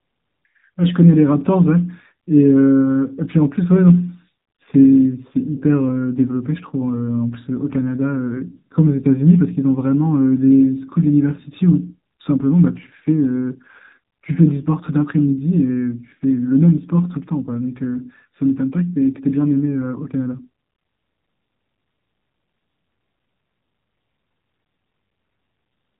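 Throughout, the speech carries AMR narrowband mobile codec damage: nothing passes above 3.8 kHz, a hard spectrogram ceiling, and the plainly buzzy, synthetic timbre suggests a low 7.4 kbps mode.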